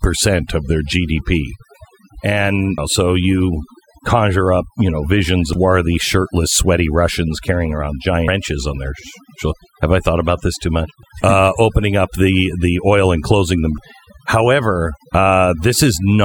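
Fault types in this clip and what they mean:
overdone noise removal: The voice sits over a near-silent, twinkling background, because noise reduction set far too strong strips quiet speech bands along with the noise.
audio missing between chunks: Abrupt skips at 2.78, 5.53, 8.28, 11.03 and 13.78 s each drop roughly a third of a second, likely lost where processing chunks were joined.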